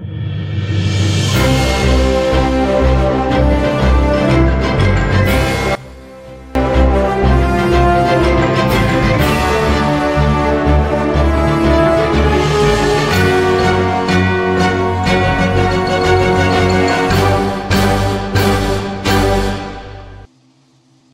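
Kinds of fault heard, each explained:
One channel inverted: from 5.75 to 6.55 s the sound drops by about 21 dB into a faint residue, its centre hollowed out. The likely cause is one stereo channel with reversed polarity, so content shared by both channels cancels when they are summed to mono.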